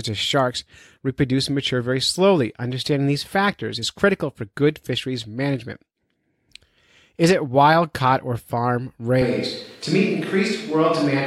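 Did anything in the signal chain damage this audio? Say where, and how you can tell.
Yes. From 9.22 s to the end, the speech abruptly turns roomy, hollow and bass-light at a similar level, likely a switch to a distant microphone at capture.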